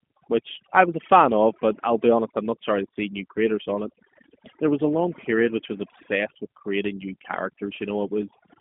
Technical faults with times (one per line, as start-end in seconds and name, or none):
0.00-8.61 overdone noise removal
0.00-8.61 G.729 codec